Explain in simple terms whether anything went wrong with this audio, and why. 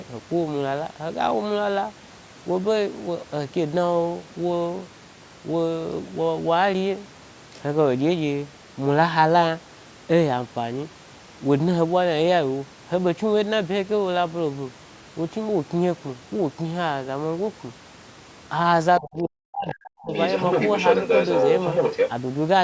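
Two problems show up near the end. From 18.99 to 20.12 s, the talker's speech is suppressed in double talk. For about a second it fades, sometimes almost to silence. Both sides were likely talking at once, so the echo canceller turned everything down.

The other side's voice is also leaking through. A brief, quieter scrap appears at 19.68 s. Then from 20.13 to 22.09 s, a second voice comes through about as loud as the talker. The echo canceller likely failed to remove the loudspeaker sound from the microphone.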